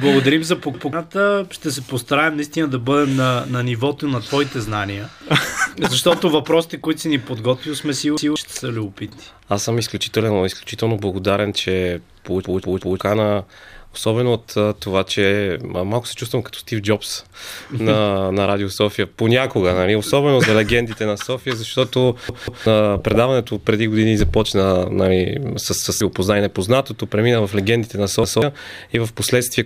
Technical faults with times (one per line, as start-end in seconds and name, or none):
0.74-0.93 repeated buffer
8.17-8.36 repeated buffer
12.45-13.00 repeated buffer
22.29-22.66 repeated buffer
25.82-26.01 repeated buffer
28.24-28.42 repeated buffer